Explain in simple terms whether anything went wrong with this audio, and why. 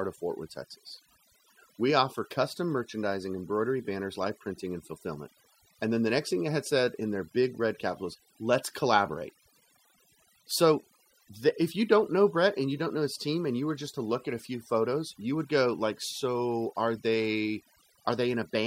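A noise reduction tool was set too strong throughout, causing overdone noise removal: the background drops and breaks up into twinkling specks.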